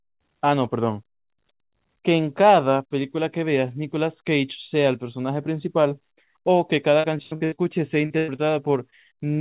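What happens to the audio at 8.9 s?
Short concealed packet loss occurs from 8.90 to 8.94 s. About 20 ms of the call never reached the decoder, and the receiver filled the gap by extending the preceding sound before blending back. It is heard as a brief smear or wobble within the 4 kHz-limited call audio.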